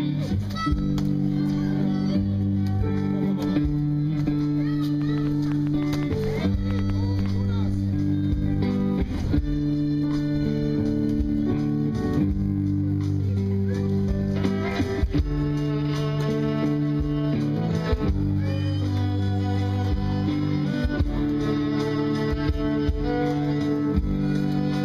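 From 5.02 to 7.27 s a train of clicks ticks and pops over the sound, about fifteen of them at an uneven pace averaging 6.25 per second. Each click has much the same sharp shape and stands out above the surrounding audio, peaking at around 5 dB over it. The likely cause is interference from nearby equipment or a faulty connection or power supply injecting a repeated pulse into the signal.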